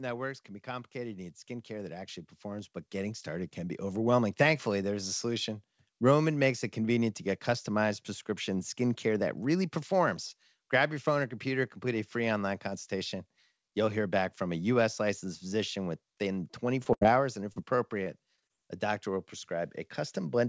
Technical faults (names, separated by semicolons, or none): automatic gain rising; short concealed packet loss; burst of packet loss; repeated packet loss (robotic sound)